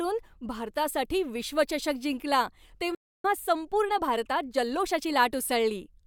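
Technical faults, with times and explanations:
2.95–3.24 s, playback stall: the speech cuts out mid-flow and the output sits silent for about 0.29 s before picking up again. That gap is likely the player starving for data or having its output thread held up, so nothing reached the output until it recovered. The sound simply halts and then resumes.
3.24–5.18 s, time-compressed catch-up: for roughly two seconds after the stall the speech runs fast, about 1.15 times normal rate, while the pitch stays where it should be. The player is working off the backlog built up during the gap by dropping short slices of audio and cross-fading across the joins. Those splices give the speech a hurried quality until normal pacing returns at about 5.18 s.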